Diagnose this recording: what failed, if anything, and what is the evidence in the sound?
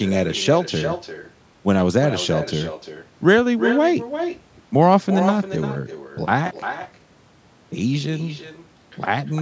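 Every phrase is shadowed, throughout, by a thinner copy arriving around 400 ms later, about 9 dB below the speech. That is echo with no canceller at the call-processing stage: the far end's loudspeaker feeds its microphone, and nothing removes the returned signal.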